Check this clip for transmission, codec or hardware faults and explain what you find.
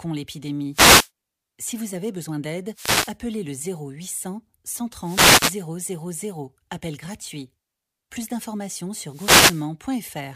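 There is one kind of fault, repeated four times: a wireless microphone noise hit at 0.71 to 1.10 s, 2.72 to 3.16 s (right after "vous avez besoin d'aide"), 5.01 to 5.61 s and 9.06 to 9.70 s. Each lasts roughly 0.4 to 0.6 s. The analogue FM radio link fades as reflected signals cancel at the receiver, so receiver noise surges up and masks the speech as a swish or burst of static. Unlike a digital dropout, which cuts to silence or glitches abruptly, these hits fill the gap with hiss.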